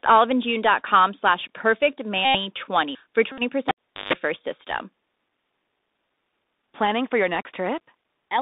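Bluetooth CVSD headset codec damage runs through this entire speech recording. The line is held to roughly 200 Hz to 3.7 kHz, and the one-bit delta coding, with its adapting step, leaves scratchy sibilants, slope-overload distortion on loud bright sounds and a grainy hiss under the speech. A Bluetooth headset packet repeated fault appears at 2.25 to 2.36 s and again at 3.32 to 3.42 s. Lost packets were replaced by re-decoding the previous one, and repeating every 3.75 ms turns into a steady buzz near 267 Hz. The longer run suggests roughly 25 packets went missing. A cable pulled and plugged in fault follows from 3.69 to 4.13 s, just before "first system system": a pop, about 0.4 s of near silence including a 50 Hz mains buzz of about 0.15 s as the plug tip made contact, then a second pop when the signal returned.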